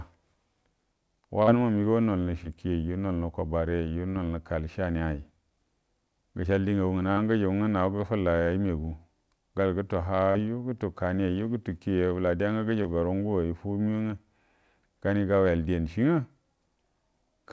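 Short concealed packet loss occurs at 1.43, 2.44, 4.10, 7.12, 10.32 (after "gol gutu", before "gutu kani yayiju") and 12.83 s (after "bəla dega nga"). Each gap of 10 to 40 ms was bridged by extending the preceding sound, heard as brief smears or wobbles. The audio carries nothing above 8 kHz, consistent with G.722 call coding.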